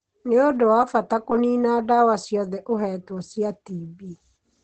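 Opus compression runs through the whole clip, from start to finish. The speech sounds muffled and hoarse, with plainly audible codec damage, and nothing reaches above 8.8 kHz. That narrowed band and the muffled, hoarse sound point to an encoder that likely dropped into its speech-oriented SILK mode for want of bits, which fits a rate near 16 kbps. At that rate it models the voice coarsely.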